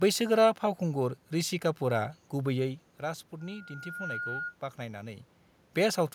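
From 3.40 to 4.56 s, a loudspeaker feedback squeal at 1.4 kHz swells over roughly 0.7 s to about speech level, as the microphone re-amplifies its own loudspeaker output.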